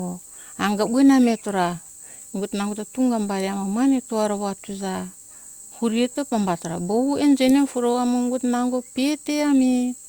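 No technical faults can be heard anywhere in this recording.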